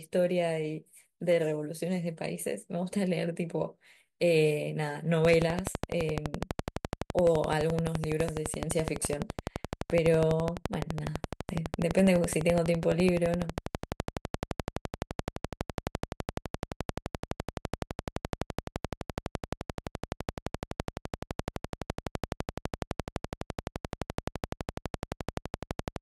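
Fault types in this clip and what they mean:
Train of clicks: a steady ticking rides over the speech from 5.25 s to the end of the clip at about 11.8 clicks per second, evenly spaced, roughly three hundred pulses in all, each standing well above the speech, around 15 dB higher, and audible in the pauses too. The regular pulsing is likely interference from nearby equipment or a faulty connection or power supply. On a waveform it shows as a comb of sharp, near-identical spikes; on a spectrogram as evenly spaced thin vertical lines spanning all frequencies.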